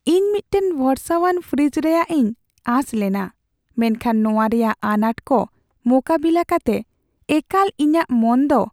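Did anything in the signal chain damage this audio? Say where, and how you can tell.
No, nothing in the signal chain has audibly damaged this speech, and the signal holds steady and intact throughout.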